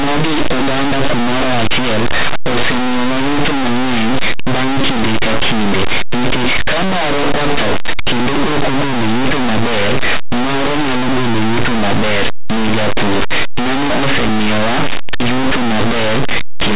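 Throughout, linear 8-bit samples are decoded as mu-law (linear audio read as companded), so values just on one side of zero leap to the largest outputs and the speech becomes harsh distortion.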